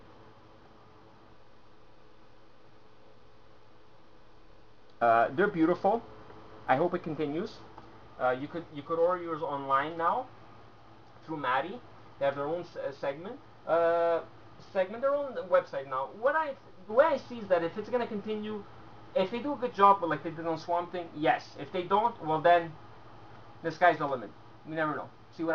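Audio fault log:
No faults detected; the signal path shows no audible defects at any point.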